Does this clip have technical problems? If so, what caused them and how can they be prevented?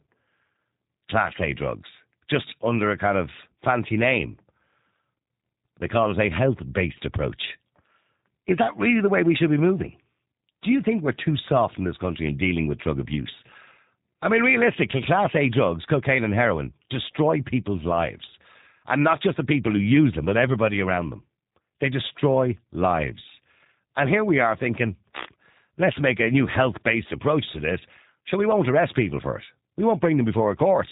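Yes. Throughout the clip, the speech carries plainly audible G.729 codec damage. Nothing passes above about 3.8 kHz, so the sound is dull and boxed in, and it has the slightly rough, synthetic texture of a low-rate speech codec, which fits an 8 kbit/s G.729A link. That codec discards the waveform and rebuilds each 10 ms frame from a vocal-tract filter, a pitch predictor and a few coded pulses. To prevent it, carry the call over a wideband codec such as G.722 or Opus.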